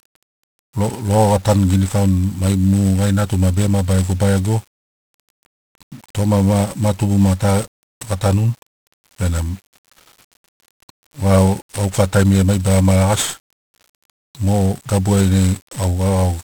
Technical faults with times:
0.00-16.44 1-bit DFPWM compression

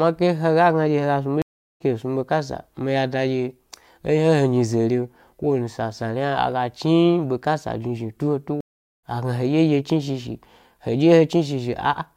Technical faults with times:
1.42-1.82 stream reconnect
8.61-9.03 stream reconnect

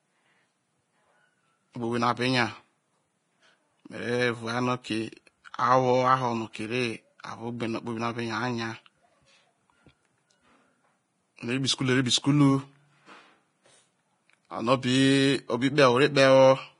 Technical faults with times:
0.00-16.79 Vorbis compression

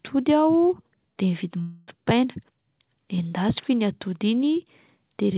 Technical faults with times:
1.61-1.90 long network dropout

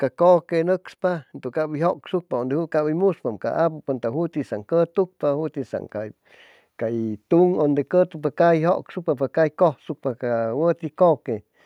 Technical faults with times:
1.01-4.40 automatic gain rising

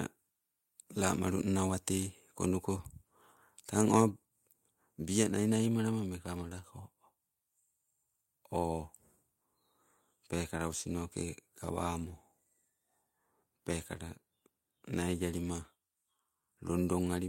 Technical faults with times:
4.11 microphone volume stepped down

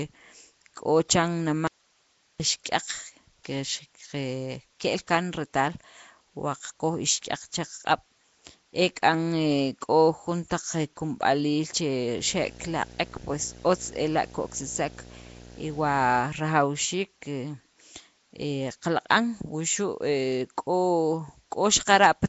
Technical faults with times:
0.00-22.29 Nellymoser compression
1.67-2.40 audio dropout to a faint residue
12.18-16.22 video or display buzz

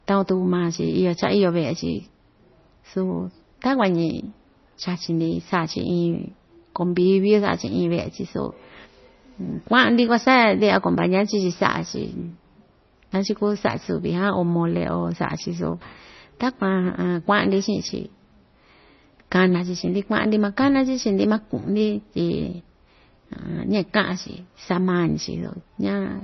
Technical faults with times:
0.00-26.23 MP3 compression

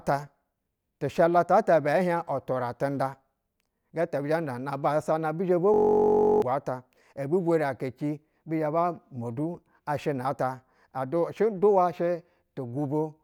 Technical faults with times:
5.74-6.42 system hang loop

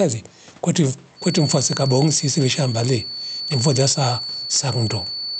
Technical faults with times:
0.00-5.40 gain pumping

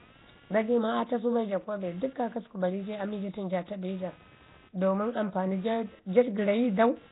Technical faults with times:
0.00-7.12 computer activity noise
0.00-7.12 Nellymoser compression

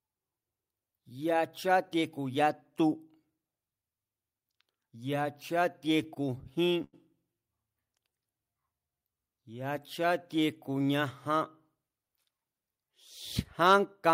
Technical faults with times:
6.03-6.95 repeated stalls (stutter)
7.99-9.15 jitter buffer slow-down
11.75-12.39 jitter buffer speed-up
13.66-13.74 microphone overload
13.92 microphone volume stepped down

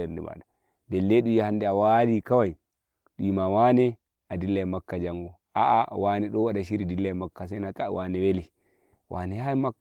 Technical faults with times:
none

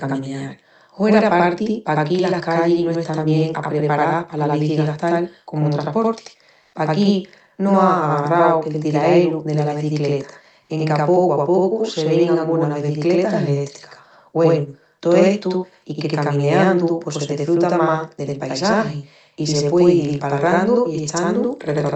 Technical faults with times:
0.00-21.96 channel delay (doubling)
6.61-6.73 comfort noise in place of the background

